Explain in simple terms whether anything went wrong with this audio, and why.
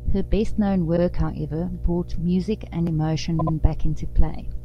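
Two things went wrong here. The first runs through the whole clip: a mains hum, a steady low drone at 60 Hz sitting fairly loud under the speech. That usually means a ground loop or a nearby transformer is leaking the wall power's frequency into the signal. It doesn't come and go, so it's baked in from start to finish and you'll hear it in every quiet gap.

The second is repeated frames, heard as two little stutters. Right after "best known", at about 0.96 s, a 52 ms chunk plays, then plays again, a quick hiccup before "however brought music and". Then just after "however brought music and", at 3.38 s, a 78 ms chunk plays three times in a row, running to about 3.54 s. Both point to compressed audio data being written or sent more than once, so the decoder replays it. Together they add about 0.21 s to the clip.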